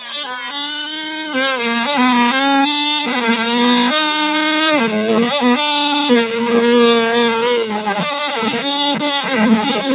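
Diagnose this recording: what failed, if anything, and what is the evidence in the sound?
A speech noise suppressor is left on across the whole clip, in the call-processing stage. It treats the steady parts of these sounds as noise, so onsets pass while sustained parts and tails are pulled down, with the level swinging by around 5 dB. Nothing is heard above 4 kHz, consistent with a G.711 mu-law call path.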